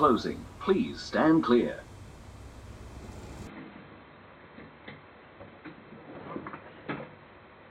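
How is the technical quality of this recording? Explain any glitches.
The recording has one clear fault. Input switched to a poorer device at 3.47 s: the top end vanishes above 4.1 kHz and faint new background noise appears, with no gap or level change, likely from a change of input device.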